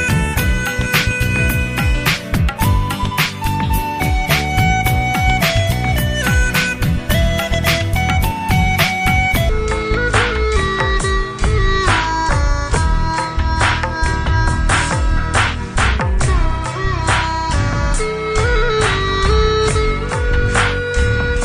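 From 9.49 s to the end, the section is at the wrong speed, about 0.65x, likely from a clock mismatch, so everything drags and drops roughly seven semitones.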